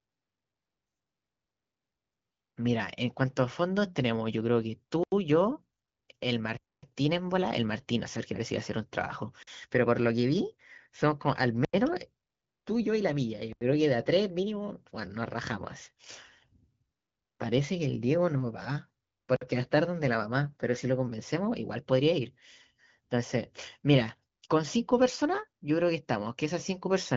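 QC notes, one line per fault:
5.04 to 19.41 s, blocks of digital silence: six hard dropouts at 5.04, 6.57, 9.43, 11.65, 13.53 and 19.36 s, 42 to 256 ms long. Each cuts straight to silence and back with no fade. The three 85 ms holes fit a 4096-sample buffer not being filled in time.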